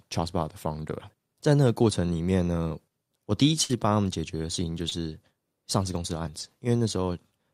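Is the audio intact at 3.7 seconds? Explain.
No. A burst of packet loss runs from 3.63 to 3.71 s. For about 60 ms the incoming audio never arrived in time to be played, so the receiver filled the hole by stretching the last sound it had and fading it down over roughly 58 ms. The result is a short, dimming smear of held sound instead of fresh speech, and when playback picks up again the stretch in between is simply gone.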